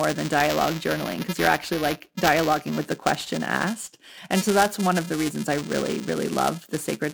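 Buffer tearing runs through the whole clip, a robotic buzz at 375 Hz that rides on the speech. The writing program and the playback hardware have drifted into overlap, so each period, which fits a 128-sample buffer, carries a small slice of audio from roughly 7 ms earlier, hard-spliced at both edges.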